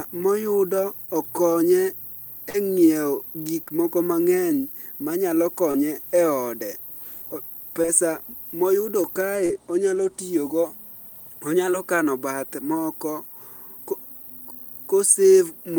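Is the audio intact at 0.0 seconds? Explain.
Yes, the audio is intact at 0.0 seconds, with no fault present at that moment.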